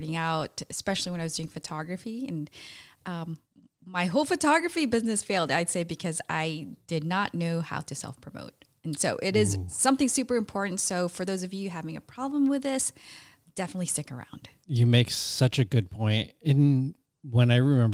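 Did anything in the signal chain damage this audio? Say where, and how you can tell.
No, no damage is audible.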